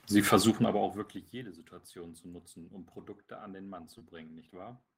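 From 0.44 to 1.44 s the level drops by roughly 20 dB, but not smoothly. It comes down in 3 dB jumps, about seven a second, with nothing easing each jump, so every step leaves a small click. That's classic zipper noise: a faint ticking that rides on the speech for the whole second the gain is moving.

Then around 3.98 to 4.02 s there's a short concealed packet loss. About 30 ms of audio didn't arrive at the decoder in time, and the receiver papered over roughly 22 ms of it by extending the sound it already had before blending back into the real signal. You hear it as a quick smear or wobble in the speech rather than a clean gap.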